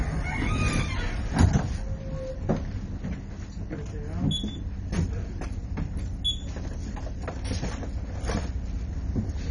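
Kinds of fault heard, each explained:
MP2 compression: dull, gurgling and granular throughout, with a warbling grit and nothing above 10.4 kHz. The cause is likely heavy MPEG Layer II coding at a starved rate, fitting 32 kbps, which shuts off the upper sub-bands and coarsely quantises those remaining.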